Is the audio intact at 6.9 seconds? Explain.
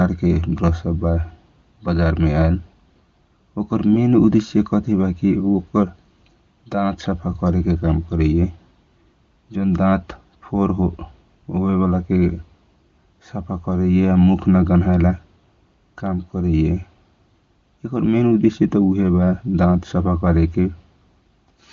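Yes, the speech is intact at 6.9 seconds, with no dropout, glitch or other fault at that moment.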